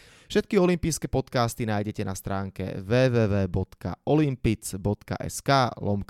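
Nothing stood out on listening to this speech recording.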